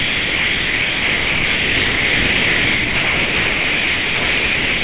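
Sound dropped by the voice detector, from 0 to 4.83 s: the clip of sounds gives way to steady comfort noise throughout, likely because the sender's voice detector classed the sound as background and stopped transmitting. The receiver filled the gap with generated noise. What remains carries nothing above 4 kHz, which fits a telephone-band call codec such as G.711.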